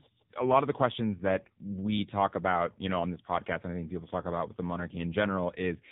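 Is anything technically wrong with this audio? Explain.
Yes. Throughout the clip the speech has passed through the AMR narrowband mobile codec, the AMR-NB codec used on 2G and 3G calls. It works at 8 kHz sampling, so nothing above 4 kHz survives, and it rebuilds the voice from a vocal-tract model fed by a handful of pulses in each 5 ms slice of a 20 ms frame. The damage is heavy, which fits a low mode around 6.7 kbps. The result is a muffled, telephone-band voice with a buzzy, synthetic edge.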